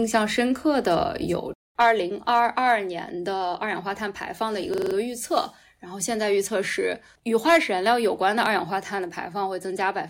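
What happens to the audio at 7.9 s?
At 7.9 s the speech is ending a burst of hard clipping that runs from 7.47 to 7.92 s. The signal is driven about 5 dB past what the stage can pass. Its peaks are sliced flat. That adds high harmonics, heard as crackle on the peaks.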